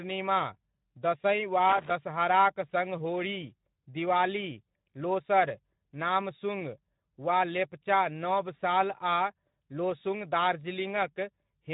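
From the first moment to the last, the speech sounds hoarse and grainy, with a hissy, washed-out top end instead of crisp detail. This is Speex codec damage, plainly audible, at a low quality setting that points to roughly 11 kbps. At that rate the CELP coder has too few bits to describe the excitation signal faithfully. The voice's fine structure is replaced by a coarse approximation, so it comes out noisy and rough.

From 1.69 to 1.91 s, an irregular burst of crackle and scratching lasts about a fifth of a second, with the sound chopping in and out. This is loose connector crackle. A worn or dirty contact is rapidly making and breaking as it shifts, interrupting the signal many times in quick succession. Any DC present on the line jumps at each break and reconnection, which adds the pops.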